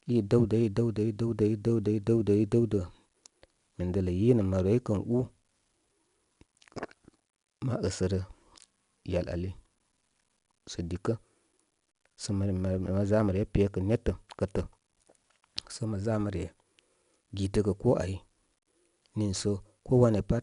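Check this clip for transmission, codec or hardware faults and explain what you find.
One codec fault runs through the whole clip: 4-bit ADPCM compression. Each sample is coded as a small 4-bit step from a prediction, with a step size that adapts. The coding error is broadband noise that rises and falls with the speech level. It sounds like a plainly audible gritty hiss riding on louder syllables. Nothing is present above 10.6 kHz, which fits a low sample rate and about 88 kbps.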